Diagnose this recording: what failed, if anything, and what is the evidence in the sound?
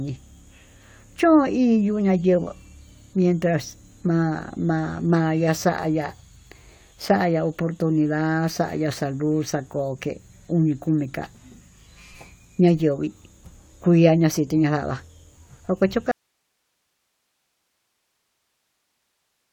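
An audio dropout to a faint residue hits the speech at 16.11 s and lasts to the end. The signal cuts out abruptly, leaving only hiss roughly 50 dB below it. The path after the break stays live, so the likely fault is a lost analogue connection upstream.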